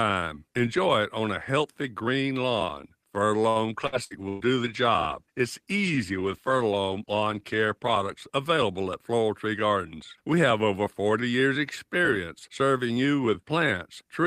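From 3.49 to 4.43 s, repeated packet loss (robotic sound) breaks the stream four times, the longest gap about 116 ms. Each hole is patched by stretching the preceding sound, so about a third of that stretch is concealment. The speech turns choppy, with pieces missing.

Starting at 3.86 s, a call bitrate drop halves the encoder's budget from 32 to 16 kbps and holds it there for about 4.3 s, until 8.3 s, just before "available at". With fewer bits, the coding becomes coarser, and the speech sounds rough and watery.

From 9.18 to 9.91 s, just after "available at", a jitter buffer speed-up trims excess buffered delay by repeatedly cutting out short pitch-period slices, about 70 ms in total. Playback runs at about 108% speed with unchanged pitch, so the speech sounds briefly hurried.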